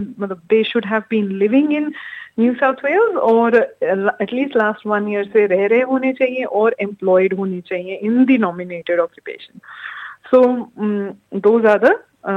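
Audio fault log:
No fault is heard anywhere in this clip. Nothing in the sound calls for a log entry.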